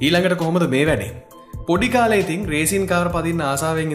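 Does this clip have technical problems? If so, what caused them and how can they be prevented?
No, no technical problems can be heard in this clip. With nothing to trace back to a cause, no preventive step is needed.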